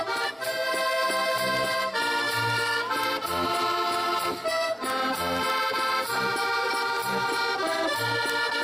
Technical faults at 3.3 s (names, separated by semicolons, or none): word clock ticks